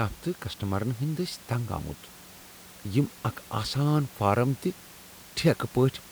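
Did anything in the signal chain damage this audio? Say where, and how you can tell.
No, nothing damaged it.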